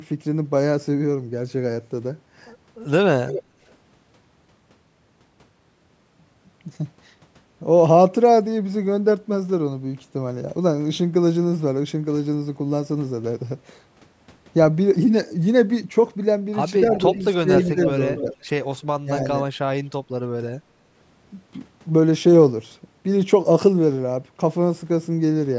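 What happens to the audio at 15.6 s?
Nothing goes wrong at 15.6 s; the speech there comes through intact, with the call microphone processing behaving as expected.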